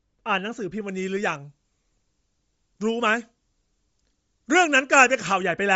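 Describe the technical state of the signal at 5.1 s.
At 5.1 s the speech sounds thin, bright and hissy, with sibilants pushed forward. This is pre-emphasis left on, running from 0.89 to 5.43 s. A treble boost of the FM 75 µs type was never matched by its de-emphasis cut, leaving 10 kHz about 13 dB hot relative to 1 kHz.

Underneath, the speech has a plainly audible grainy, breathy edge, and nothing reaches above 7.7 kHz. The likely cause is Bluetooth LC3 compression: the codec discards much of the upper spectrum and patches it with noise, and this much damage fits a low bitrate around 32 kbps.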